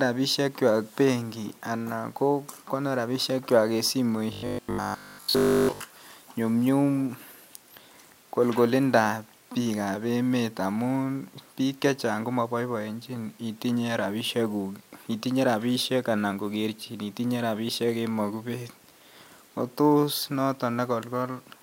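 A speech clip. From 4.33 to 5.85 s, right after "anan kogonor rabisiekwak en", the voice collapses into a rigid, metallic buzz fixed at 50 Hz that only loosely tracks the speech contour, with essentially all of that stretch made of repeats. This is robotic sound from repeated short buffers, likely caused by audio arriving too seldom, so the software looped the last fragment, about 20 ms long to match the 50 Hz buzz, while the real audio was skipped.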